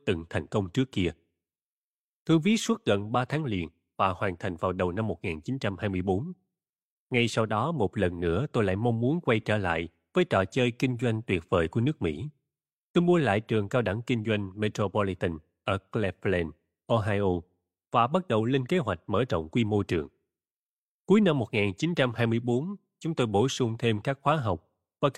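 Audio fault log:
Nothing to log here, as the speech comes through without any faults at all.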